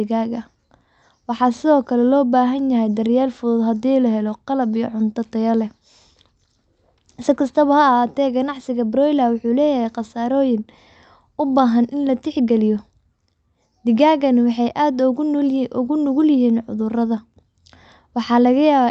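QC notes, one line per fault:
The speech comes through a WebRTC call path whose upper band stops near 8 kHz, as an Opus codec at that bandwidth setting would produce, and no faults are present in the signal.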